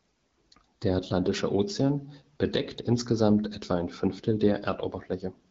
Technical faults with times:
none

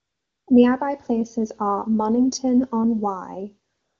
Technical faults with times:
0.00-0.47 AMR comfort noise
3.73-4.00 AMR comfort noise

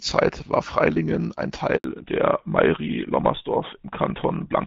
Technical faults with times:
1.76-1.84 handover gap
1.84-4.66 fallback to narrowband

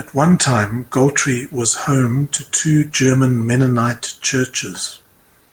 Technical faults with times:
none

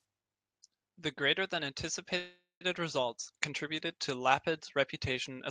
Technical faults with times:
2.17-2.70 call audio freeze

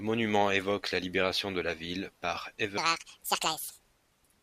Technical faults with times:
2.78-4.42 section at the wrong speed

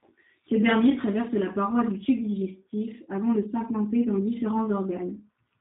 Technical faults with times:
0.00-5.61 G.729 codec

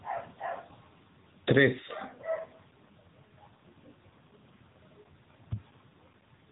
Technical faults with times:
0.00-6.51 AMR narrowband mobile codec

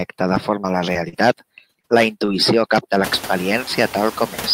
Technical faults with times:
0.00-4.53 noise suppressor artifacts
0.35-1.21 repeated packet loss (robotic sound)
1.73-1.85 short concealed packet loss
2.25-2.29 short concealed packet loss
2.27-2.29 lost packet rebuilt from error correction

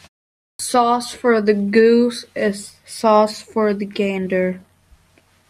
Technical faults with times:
0.55-0.59 clipped start after a pause

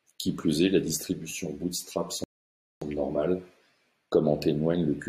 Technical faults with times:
1.04-3.40 channel delay (comb filtering)
2.24-2.82 rebuffering stall

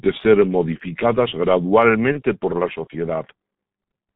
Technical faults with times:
0.00-4.16 G.723.1 codec
2.12-2.22 VoIP packet loss concealed by the speech codec

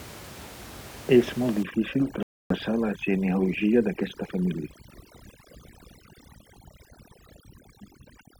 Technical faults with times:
1.63-8.39 overdone noise removal
2.23-2.53 Bluetooth stall

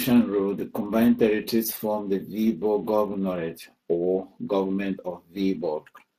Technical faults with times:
0.00-6.18 Speex codec

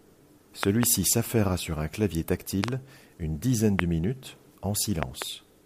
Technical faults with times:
0.63-0.85 loud pop
2.64-2.70 loud pop
3.79-3.81 loud pop
5.03-5.24 loud pop

